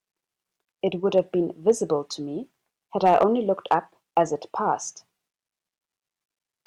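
Hard clipping hits this speech clip at 1.17 s, 1.69 s, 3.05–3.23 s, 3.71–3.74 s and 4.17–4.21 s, where the loudest peaks exceed what a stage in the chain can pass and are sliced flat. The flattened tops add harsh high harmonics. The brief events, overdriven by about 1 dB, sound like small crackles. The longer stretch near 3.1 s, at about 4 dB over, and the one near 3.7 s, at about 3 dB, give a rougher, fuzzier edge.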